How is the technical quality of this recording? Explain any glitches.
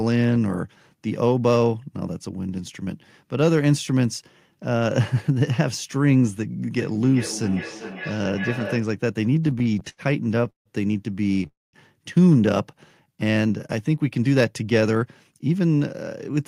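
The recording has several network and playback glitches clustered in the second half, each audible as echo, stalling, a gap, or a change in pace.

From 6.72 to 8.92 s there is feedback echo between two devices. A second device's playback reached a microphone that its canceller couldn't cover, so the speech returns roughly every 0.4 s, thinner each time, peaking about 12 dB below the speech.

From 9.25 to 10.68 s there are repeated stalls (stutter). Late packets emptied the jitter buffer over and over, and each stall was filled by stretching the last sound. The longest lasts about 0.16 s, and together the stalls add about 0.38 s, so the speech drags and stutters.

From 11.47 to 11.75 s there is a call audio freeze, likely from packets held up in transit. The sound is bridged for about 0.26 s, mostly silence, and then resumes where it stopped.

From 12.76 to 13.17 s there is a jitter buffer slow-down. 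To rebuild its reserve, the receiver repeated pitch periods, adding about 36 ms. The speech runs at about 93% speed with its pitch unchanged.

From 15.02 to 16.36 s there is a jitter buffer speed-up. To shrink an excess delay, the receiver cut short pieces totalling about a tenth of a second. The speech runs at about 106% speed and sounds hurried.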